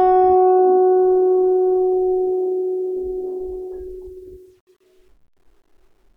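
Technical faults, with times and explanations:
No technical faults can be heard in this music.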